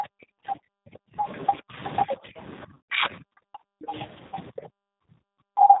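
Throughout, the speech sounds slightly rough and synthetic with no high end above 4 kHz, the plainly audible signature of the G.729 codec rebuilding the voice at 8 kbit/s.

From 0 to 3.93 s the voice dips repeatedly, by up to around 40 dB and for about a second in total. This is speech suppressed in double talk, likely from an echo canceller turning down both this talker and the loudspeaker echo while the far end was talking.

Faint scraps of a second voice, roughly 30 dB below the speech, appear at 1.26 to 1.56 s, 3.09 to 3.16 s and 3.82 to 4.07 s. This is the other side's voice leaking through, likely loudspeaker echo that the canceller did not fully remove.

At 2.74 to 2.79 s the sound smears into a buzzy tone or coloured noise that fades, and it does so again at 4.29 to 4.35 s. This is VoIP packet loss concealed by the speech codec, extrapolating over gaps of 150 ms and 30 ms.

From 5.43 s to the end the speech drops again by around 40 dB, for about 0.3 s. 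This is likely further double-talk suppression.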